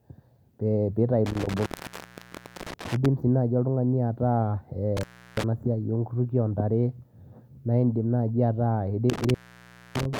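Intermittent contact breaks the speech three times: from 1.26 to 3.06 s with the line open for about 1.0 s, from 4.97 to 5.44 s with a 0.34 s dropout, and from 9.10 s to the end at 10.20 s with a 0.61 s gap. Each time a loose plug or cable connection parts briefly, the sound cuts out with crackle at the edges, leaving faint hiss until the contact closes again.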